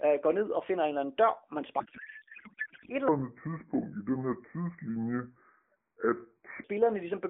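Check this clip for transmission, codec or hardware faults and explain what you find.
Two faults are audible, both in the middle of the speech.

From 1.80 to 2.90 s, between "eller anden dør man" and "et eller", there is a codec payload misread. The AMR decoder parses frames with their fields misplaced, which fits octet-aligned packing being read as bandwidth-efficient, so the speech turns to garbled warbling noise.

From 3.08 to 6.64 s, between "et eller" and "ligesom begynder at", a section plays at the wrong speed, 0.655 times normal. Pitch drops roughly seven semitones, giving deep, dragged speech, likely from playback against a mismatched clock.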